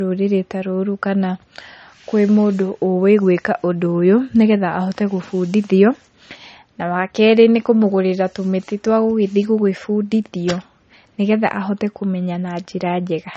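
Low-bitrate audio saved at a high bitrate runs through the whole speech clip. Nothing is present above 8.4 kHz, and the dull, smeared texture of heavy MP3 coding remains. This likely comes from a roughly 33 kbit/s MP3 re-encoded at a higher bitrate, which cannot restore the discarded detail.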